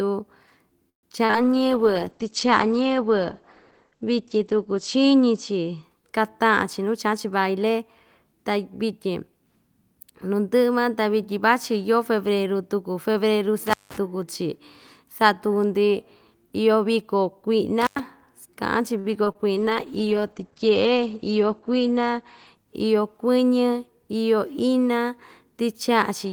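At 0.89 s the speech stops for about 0.14 s. The last sound fades to silence for about 0.12 s, then resumes where it stopped. This is a call audio freeze, likely from packets held up until the jitter buffer ran empty.

At 1.25 s and 1.31 s comes short concealed packet loss. About 40 ms and then 20 ms never arrived. The receiver filled them in, leaving a brief smear.

From 1.45 to 6.17 s there is a call bitrate drop. The encoder was starved of bits. The sound turns rough and muffled, with nothing above 8 kHz. This points to roughly 11 kbps, held for about 3.4 s.

From 6.44 to 8.39 s a jitter buffer speed-up trims excess buffered audio. Short pitch-period slices are cut, around 150 ms in total. The speech runs 7 percent fast at unchanged pitch and sounds hurried.

At 13.67 to 13.97 s and 17.81 to 18.0 s an intermittent contact opens. The sound drops out for about 0.17 s and then 0.1 s, with crackle at each edge.

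At 18.99 s a short stall from a late packet holds the last sound for about 46 ms. It is heard as a slight buzz or dip, and nothing is lost.

At 19.24 s and 19.32 s more short concealed packet loss leaves two quick smears or wobbles, each covering about 20 ms of missing audio.

From 19.55 to 23.39 s a second call bitrate drop makes the speech watery and dull again. It is capped near 8 kHz, and the sound points to about 10 kbps for about 2.6 s.

Inside that stretch, from 21.06 to 21.51 s, another jitter buffer speed-up removes about 50 ms. The speech runs 11 percent fast.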